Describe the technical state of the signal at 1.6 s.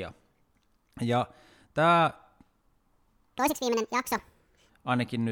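At 1.6 s the speech signal is intact, with no technical fault present at that moment.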